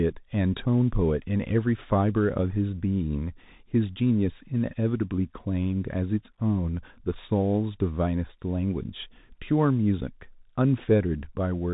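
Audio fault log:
Throughout: Bluetooth CVSD headset codec. Speech stops near 3.8 kHz, sibilants turn scratchy, and granular hiss sits underneath, fitting a 64 kbps one-bit delta coder.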